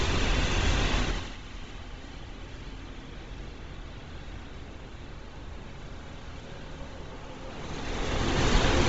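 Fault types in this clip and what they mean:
Bluetooth LC3 compression: Heard throughout these everyday sounds, with nothing above 7.7 kHz and a heavy grainy, breathy edge where the upper band has been stripped and refilled with noise. The likely cause is the LE Audio transform codec running at a low rate, which fits 24 kbps with 7.5 ms frames. At that rate it discards much of the upper spectrum in every short frame and patches the gaps with synthetic noise.
Zipper noise: From 1.02 to 1.37 s, the level falls by roughly 15 dB in audible 4 dB steps, about ten per second, instead of as a continuous fade. Each jump in gain is applied at once with no smoothing, so it puts a small click into the waveform. Together the clicks form a ticking, zipping texture that rides on the sound only while the level is moving.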